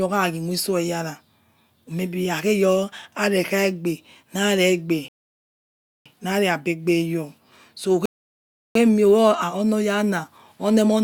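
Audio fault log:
5.08–6.06 s and 8.06–8.75 s: rebuffering stall. The player used up its downloaded audio and halted until more arrived, so the speech cuts to silence for 0.97 s and then 0.70 s. Each time it resumes exactly where it broke off, with nothing lost but time added.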